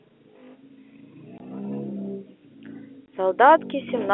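Twice in this speech clip the sound drops out for a brief hard gap, from 1.38 to 1.40 s and from 3.06 to 3.08 s. This is packet loss filled with silence: each 20 ms hole fits a single lost packet that the receiver replaced with silence, so the waveform is cut off abruptly at both ends. The speech comes through a G.711 telephone line, with the familiar narrow band of roughly 250 Hz to 3.4 kHz.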